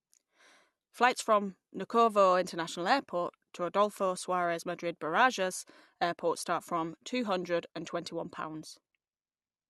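No technical faults can be heard anywhere in the recording; the signal stays steady and intact throughout.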